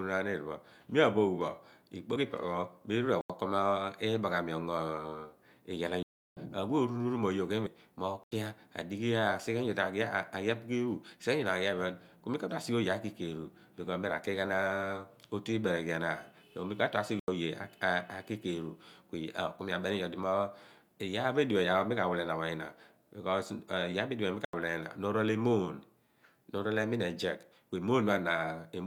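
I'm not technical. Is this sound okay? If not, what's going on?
No. Twice, compressed frames skipped: at 2.16 s about one 32 ms chunk of the speech is missing, and at 7.66 s about three chunks, roughly a tenth of a second. The speech jumps ahead at those points.

There is also a block of digital silence, five times: the sound drops to dead silence. Short 85 ms holes come at 3.21, 8.24, 17.20 and 24.45 s, and a longer 0.34 s gap at 6.03 s. This fits the playback program not filling its output buffer in time.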